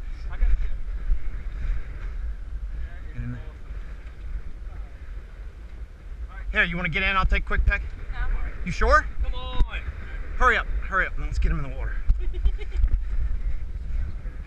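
No technical faults can be heard anywhere in the signal.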